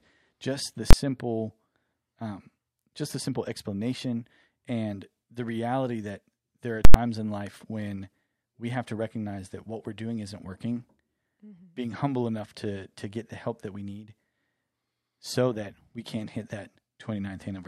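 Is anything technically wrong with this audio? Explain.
Yes. Invalid numbers at full scale hit this speech twice: a single bang at 0.91–0.93 s after "just the", and a pop pair bracketing silence at 6.85–6.94 s, between "reality that there are" and "in life when we". An invalid calculation pinned each whole block at full scale. Unlike clipping, which flattens only peaks, the entire block is lost; the durations fit 1024- and 4096-sample blocks.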